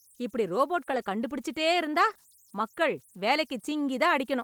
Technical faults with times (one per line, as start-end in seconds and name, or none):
0.00-4.43 converter idle tones
0.91-0.97 lost packet rebuilt from error correction
2.01-2.11 lost packet rebuilt from error correction
2.13-2.17 short concealed packet loss